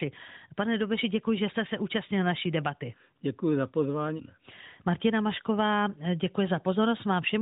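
No faults are heard in this speech; the band stops at 4 kHz and the light coding texture fit the AMR narrowband mobile codec running normally at its 12.2 kbps mode.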